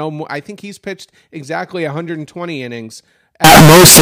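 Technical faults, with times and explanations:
3.44–4.02 s, signed and unsigned mixed up: the speech abruptly becomes very loud, harsh distortion, with quiet moments as loud as the rest. Likely 16-bit samples read with the wrong sign convention, flipping the top bit so every zero crossing jumps across the full range.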